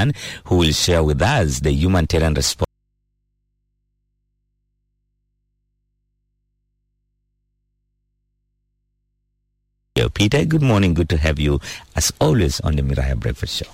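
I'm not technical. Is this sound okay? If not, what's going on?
No. From 2.65 to 9.97 seconds there is an audio dropout to a faint residue. The sound cuts off abruptly, leaving over seven seconds of nothing but a very quiet mains hum, then snaps back mid-flow. That leftover hum is the clue: the connection after the break stayed live while the actual sound went missing, likely a lost source or loose link. A natural pause or fade-out would ease in and leave silence, not hum.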